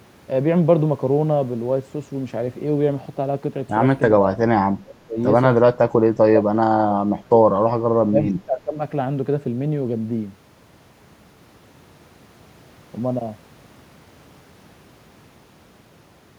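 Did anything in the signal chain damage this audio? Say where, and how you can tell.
Yes. Speech suppressed in double talk occurs at 4.19–4.4, 4.81–5.19, 5.89–7.56 and 8.09–8.78 s, in call processing. The speech sinks by roughly 15 to 25 dB in each stretch, likely because the echo canceller mistook overlapping near-end talk for echo and attenuated both.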